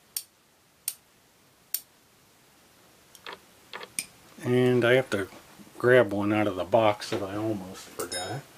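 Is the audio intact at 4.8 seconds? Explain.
Yes, the audio at 4.8 seconds is intact, with no dropout, click, distortion or other fault at that point.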